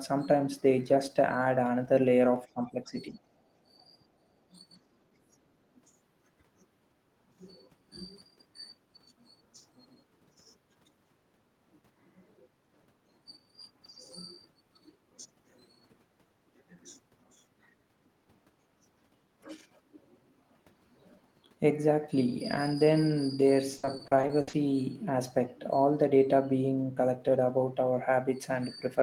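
Speech suppressed in double talk at 2.54–3.3 s, 3.68–3.97 s and 4.2–4.37 s: the voice dips by around 10 to 20 dB, likely because the echo canceller mistook simultaneous talk for echo.

Repeated packet loss (robotic sound) from 23.77 to 24.55 s: a rapid string of short holes, the longest 60 ms, is patched with repeated sound, leaving over a third concealed and a choppy, robotic texture.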